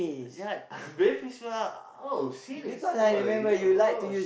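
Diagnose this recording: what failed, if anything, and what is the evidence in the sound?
Nothing failed here; the speech carries no audible fault.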